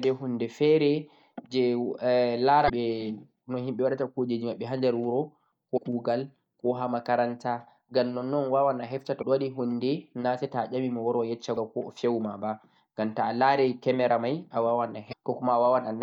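At 2.65–2.70, 5.74–5.78, 9.19–9.23, 11.54–11.58 and 15.09–15.13 s the speech is broken by short disturbances of about 45 ms each, the sign of damaged data in a compressed stream. At each point corrupted bytes made the decoder misread its frames and lose sync until it found the next valid header. Unlike a click, these bursts last tens of milliseconds.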